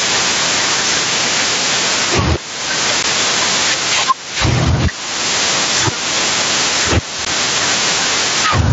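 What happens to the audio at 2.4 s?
Gain pumping runs through the whole clip, including 2.4 s. The input gain is likely set far too high, so a fast limiter clamps down on every loud sound, swinging the level by around 15 dB. Loud and soft parts end up closer in level, and the sound is squashed.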